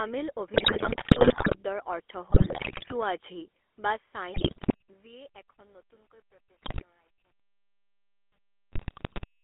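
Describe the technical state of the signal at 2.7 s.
At 2.7 s the weak radio link is corrupting the GSM bit stream. These GSM bit errors run from 2.3 to 2.93 s, and the decoder reads wrong filter, pitch and gain values frame after frame, so the speech breaks into squawks, pops and gargling bursts with sudden jumps in level.

Underneath, the GSM full-rate codec runs throughout. It rebuilds the voice from a vocal-tract model driven by sparse pulses, which fits 13 kbps coding, and the line band stops near 3.4 kHz, giving the speech a plainly buzzy, gravelly roughness with no top end.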